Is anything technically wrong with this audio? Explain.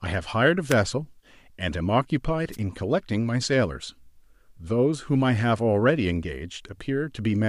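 Yes. The speech has two wireless microphone noise hits, at 0.68 to 0.75 s and 2.52 to 2.57 s. Each is a brief burst of static. The analogue FM radio signal faded as reflections cancelled, so receiver noise rose over the voice. Both sound like quick swishes.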